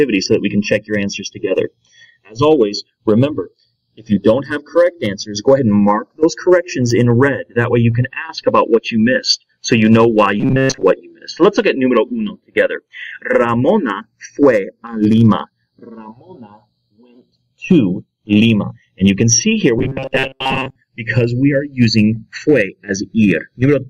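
From the start and across the whole clip there is channel drift. The two channels appear to run from separate clocks that disagree by a few tens of parts per million, so the offset between them grows steadily to roughly half a millisecond by the end. Summed to mono, this moving delay sweeps comb-filter notches slowly through the spectrum, and the result is a slow, continuous flanging that changes colour as the clip goes on.

At 10.40 to 10.84 s, and again at 19.79 to 20.76 s, the sound turns into a robotic, metallic buzz at 133 Hz. It still roughly follows the shape of the original audio. The likely cause is starved playback: fresh audio stops arriving on time, so the last short buffer, about 7.5 ms long to match the 133 Hz repeat rate, is played over and over while most of the real material in those stretches is skipped.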